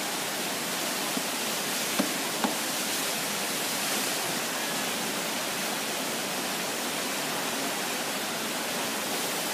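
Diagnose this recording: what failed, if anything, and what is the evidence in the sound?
Nothing failed here as far as I can hear, so there's no stage to point a finger at and no evidence of anything going wrong anywhere in the recording.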